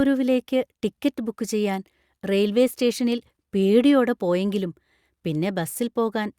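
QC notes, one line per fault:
Nothing to flag on this one; the speech comes across fine all the way and there's no technical fault to note.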